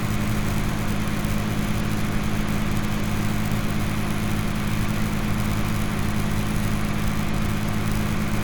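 No technical faults can be heard in this recording of everyday sounds.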